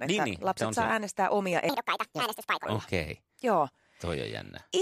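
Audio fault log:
1.69 to 2.65 s, section at the wrong speed: this stretch of speech runs 1.65 times too fast, so it sounds hurried and squeaky, pitched up by roughly ten semitones, then snaps back to normal. Pace and pitch move together, likely from playback against the wrong clock.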